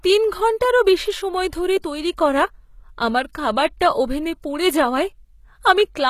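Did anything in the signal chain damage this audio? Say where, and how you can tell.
Yes. The codec stage did. Throughout, the treble sounds synthetic and gritty, with s sounds turning lispy and metallic and nothing above 14.9 kHz. This points to HE-AAC compression at a low bitrate, likely around 20 kbps. The treble is rebuilt by copying lower bands upward.

The codec also causes pre-echo at 1.82 s, between "ঘন্টারও বেশি সময় ধরে" and "তৈরি করা". A brief hiss of about 19 ms runs ahead of the attack and softens it. The quantisation noise is spread across the whole transform block, so it fills the quiet gap before the onset.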